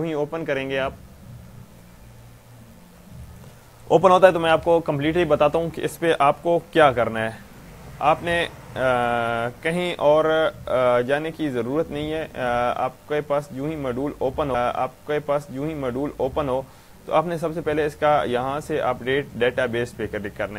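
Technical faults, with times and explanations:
14.54 to 16.53 s, stream segment repeated: the player queued the same chunk twice, so roughly 1.98 s plays again after a small blip at the jump back.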